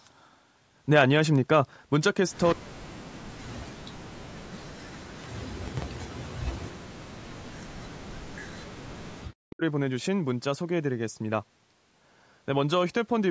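At 2.47 to 2.53 s there is an echo leak: a brief, faint copy of the speech returns about 181 ms late, around 20 dB below the voice, most likely a loudspeaker echo that slipped past the canceller. It is a separate delayed repeat, not reverb smearing the original.

Speech suppressed in double talk follows at 2.55 to 3.26, 3.65 to 4.74, 4.99 to 5.69, 5.93 to 6.98, 7.22 to 8.51 and 8.89 to 9.62 s. The voice sinks by as much as 40 dB in pieces, likely as the canceller ducks everything while the far side talks. Unlike packet dropouts, these dips are gated by the canceller.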